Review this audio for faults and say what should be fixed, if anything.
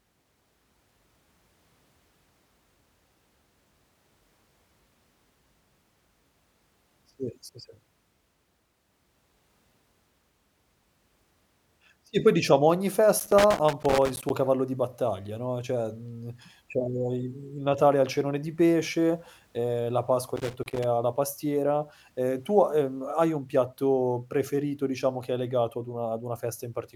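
Loose connector crackle breaks into the speech from 13.19 to 14.30 s, between "poi diciamo ogni" and "cavallo di battaglia no", and again from 20.36 to 20.84 s, just before "ha la pastiera". A worn or dirty contact is making and breaking as it shifts, chopping the signal into an irregular scratchy burst. Unlike evenly spaced digital clicks, the bursts are ragged and cluster while the contact moves. Reseat or clean the connector, or replace the cable and secure it against movement.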